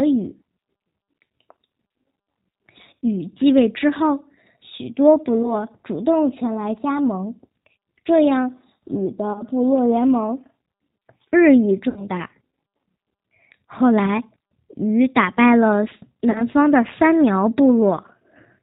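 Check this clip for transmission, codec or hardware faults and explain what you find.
Two faults are audible in this speech: G.729 coding throughout, and six episodes of packet loss concealed by the speech codec.

The G.729 codec runs for the whole clip at 8 kbit/s, and its damage is plainly audible. Speech is rebuilt from a vocal tract filter and a few pulses per subframe, so it sounds rough and faintly synthetic, with nothing above 4 kHz. That pulse-driven graininess, not just band-limiting, separates it from a plain telephone filter.

VoIP packet loss concealed by the speech codec occurs at 5.43–5.65, 9.33–9.43, 11.89–12.04, 14.06–14.11, 16.31–16.44 and 17.97–17.99 s. The decoder stretches the last pitch and filter, producing a buzzy tone or coloured noise that fades, rather than silence. The longest, at 11.89 s, suggests about 70 ms lost, and each recovery stays weak after speech returns.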